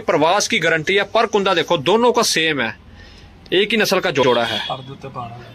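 At 0.88 s there's a quick repeated frames stutter: a tiny 2.9 ms block plays three extra times. Then at 4.22 to 4.29 s, a 62.4 ms chunk, which fits a run of a few frames, plays twice, giving an audible skip-back.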